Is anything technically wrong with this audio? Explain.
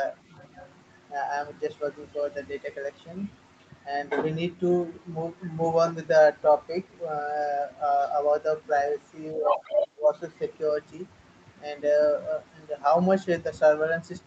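Yes, there are two kinds of fault. Other side's voice leaking through, at 0.38 to 0.69 s and again at 9.46 to 9.88 s: faint, far below the speech at first, then roughly as loud as the talker. This is likely loudspeaker echo the canceller failed to remove from the microphone.

Speech suppressed in double talk, from 9.35 to 10.04 s: the talker's speech dips by as much as roughly 20 dB, for about half a second in total, while the leaked voice overlaps it. The likely cause is that the echo canceller could not separate the talker from that echo, so it turned both down.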